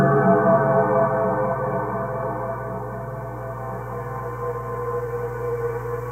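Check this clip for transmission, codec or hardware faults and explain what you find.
One hardware fault runs through the whole clip: mains hum. From start to finish a steady low tone at 60 Hz sits under the sound, fairly prominent at roughly 10 dB below it. The power line is leaking into the signal path, most plausibly through a ground loop or a nearby transformer, so the 60 Hz mains cycle is added to the audio. On a spectrogram it shows as a bright, unbroken horizontal line at 60 Hz across the full duration. On the waveform it appears as a regular low-frequency ripple that thickens the trace even in the quieter stretches.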